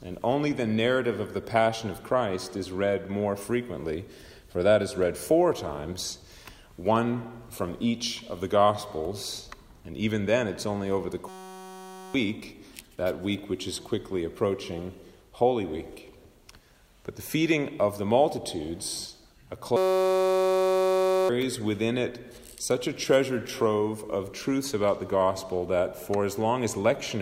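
From 11.29 to 12.14 s and again from 19.77 to 21.29 s, the audio collapses into a steady buzz at 188 Hz, the sign of a system hang loop. The machine stalled while the sound hardware kept replaying the same 5.33 ms slice, which fits a 256-sample buffer. About one and then about one and a half seconds of real audio are lost. Unlike a dropout or a machine-gun stutter, there is no silence and no audible chunk repetition, only this fixed-pitch tone.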